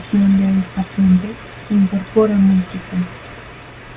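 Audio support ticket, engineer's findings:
No faults found: the speech signal shows no audible technical defects anywhere in the recording.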